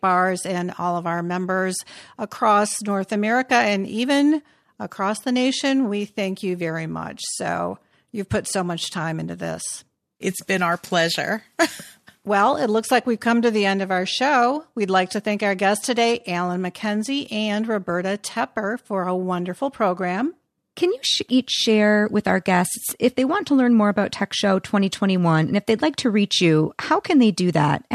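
No technical faults can be heard anywhere in the recording.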